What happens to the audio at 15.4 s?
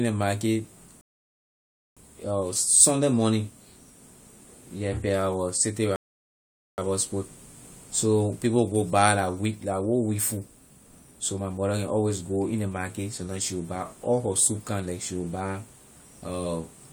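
Nothing goes wrong at 15.4 s; the audio there is intact.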